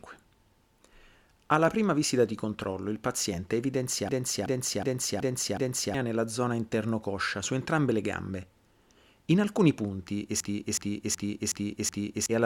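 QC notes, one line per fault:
4.09–5.94 s, system hang loop: the system or audio driver stalled right after "di controllo il paziente" while the sound hardware kept replaying its ring buffer, so a 0.37 s fragment repeats five times at 2.7 Hz like a skipping record. About two seconds of speech is lost before "nella zona". The loop length fits a 16384-sample buffer.
10.40–12.26 s, system hang loop: the same stall recurs after "alcuni punti", again cycling one buffer of about 0.37 s five times at 2.7 Hz. The result is a rhythmic stutter in place of roughly two seconds of speech.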